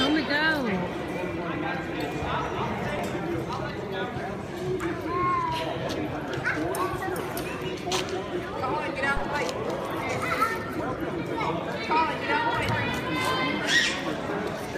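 At 9.17 s a phantom power thump appears, lasting to about 9.27 s. Switching a supply on a live input sends a DC step through the coupling capacitors, which the input passes on as a single low, dull thud peaking near -20 dBFS, well short of overload, and dying away in about 23 ms. Unlike a handling bump or a plosive pop, it has no rustle and no breathy onset, only one clean, deep pulse.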